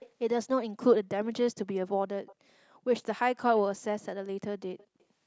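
Faint echo leak at 0.0–0.09, 2.26–2.35 and 4.78–5.04 s: a quiet copy trailing about 230 ms behind, likely from an imperfect echo canceller, showing as weak delayed spectrogram streaks.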